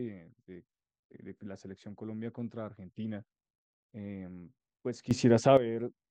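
At 5.11 s the speech and the background noise beneath it leap upward together by about 12 dB in an instant, with no swell or fade, and stay at that raised level until 5.57 s. This is a sudden gain jump. The likely cause is a digital gain change applied between one sample and the next with no ramp, such as a level setting or a bit shift taking effect abruptly, so everything in the signal is scaled at once.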